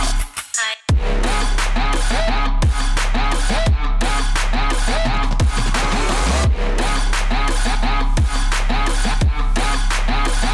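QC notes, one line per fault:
No faults heard.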